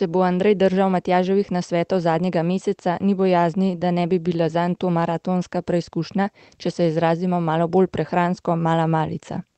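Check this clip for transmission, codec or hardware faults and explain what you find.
No transmission, codec or hardware faults turn up in this speech clip.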